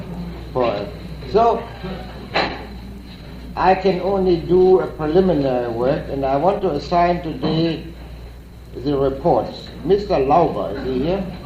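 From 1.06 s to 6.45 s there is a call bitrate drop: the network's bandwidth estimate fell, so the encoder was forced to spend far fewer bits, consistent with a fall from about 64 kbps to roughly 28 kbps, held at its lowest for about 4.3 s. The sound turns coarse and muffled. On a spectrogram the upper band thins and cuts off abruptly across that span, while the waveform looks largely unchanged.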